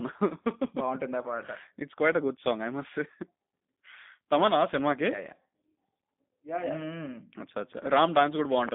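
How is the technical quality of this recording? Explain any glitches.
The speech is clearly degraded by a low-rate telephone codec, with audible damage across the whole recording.

G.729 codec, throughout: the sound is confined to a narrow line band, from about 150 Hz to 3.6 kHz, and rebuilt from a vocal tract filter, a pitch predictor and a few sparse pulses per short frame, which fits an 8 kbit/s G.729A stream. The result is a muffled, boxy tone lacking bass and treble, with a rough, buzzy, slightly synthetic texture that is plainly audible.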